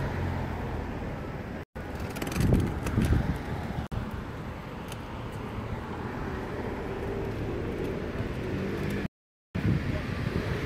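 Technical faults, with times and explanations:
Throughout: USB whine. A steady tone fixed at 1 kHz sits under the sound at roughly 40 dB below the programme level. Its pitch matches the 1 ms frame rate at which a USB bus draws current, so the bus activity is getting into the audio path through shared power or ground. Because the pitch is locked to the frame timing, it does not drift or follow the material.
1.63 s, 3.87 s and 9.06 s: Bluetooth stall. At each of these points the sound cuts to silence and then resumes. The gaps last about 123 ms, 50 ms and 485 ms, and the last one ends at 9.55 s. The pattern of abrupt dropouts followed by a clean restart most likely comes from interference on a wireless link. Packets were delayed long enough that the receiver's buffer ran empty, and playback waited until the missing data arrived.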